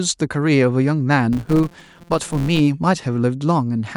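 From 1.33 to 2.60 s, a filter restarted on every block clicks at each block start, producing a 172 Hz buzz tracking speech level, consistent with 256-sample blocks.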